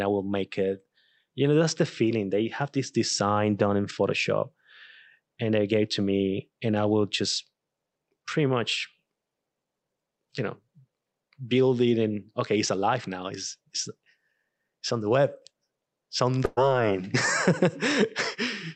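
At 16.45 s, just after "it's on", a burst of packet loss hits the call stream: a run of packets never arrived in time, so the receiver filled about 114 ms by stretching the last received sound and fading it down, with a brief silence of around 10 ms. That fill sounds like the last sound held and dimming, and when playback resumes at 16.59 s about 120 ms of the talker's speech is simply gone, over audio band-limited to about 8 kHz by the call codec.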